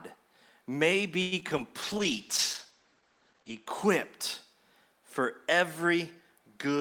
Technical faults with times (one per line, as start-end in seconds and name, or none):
1.21-1.34 call audio freeze
1.40-1.60 short concealed packet loss
1.84-3.73 call bitrate drop
2.71-2.95 jitter buffer slow-down